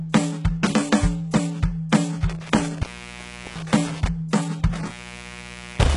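Right from the start the music carries heavy codec damage, likely HE-AAC compression at a very low rate, around 12 kbps. Nothing survives above 11.1 kHz, and the treble that is there is rebuilt from copied lower bands, so its harmonics don't line up with the rest.

Then there's intermittent contact, twice: from 2.29 to 4.09 s, with the line open for about 0.73 s, and from 4.73 to 5.96 s, open for about 0.89 s. A loose connection drops the music out and breaks it up, with crackle at the edges.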